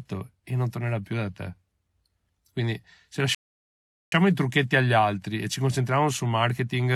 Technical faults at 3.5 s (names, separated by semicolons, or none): rebuffering stall